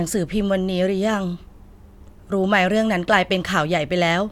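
A short bit of speech, and there's nothing technically wrong to point to here.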